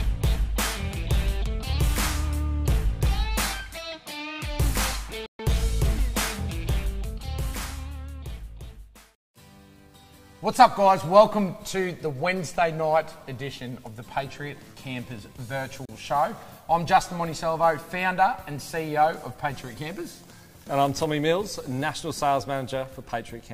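The audio has two digital broadcast dropouts, at 5.26 to 5.40 s and 15.85 to 15.89 s. Both are silent holes entered through a 3 ms fade, where the receiver muted after losing frames. The 128 ms and 32 ms gaps fit four and one 32 ms frames.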